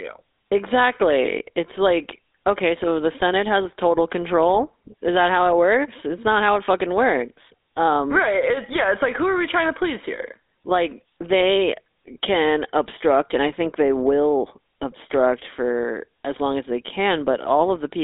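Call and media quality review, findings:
GSM full-rate codec, throughout. The encoder models the vocal tract and drives it with a sparse, regularly spaced pulse excitation, consistent with 13 kbps full-rate coding. The result is plainly audible buzzy, gravelly roughness on speech. Line band roughly 250 Hz to 3.7 kHz, with nothing above 3.8 kHz, so the audio sounds thin and muffled.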